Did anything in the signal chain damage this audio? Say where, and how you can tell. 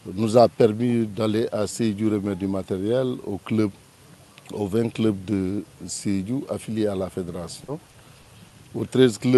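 Yes. At 6.93–6.95 s and 7.03–7.05 s there are brief rough, noisy 20 ms patches without any gap. This is a lost packet rebuilt from error correction: the network dropped packets, and the decoder played their low-bitrate Opus FEC copies.

From 7.64 to 8.52 s the sound turns choppy and robotic, with four holes of up to 40 ms. This is repeated packet loss on the network: each gap was concealed by extending the last sound, but about 120 ms is still missing.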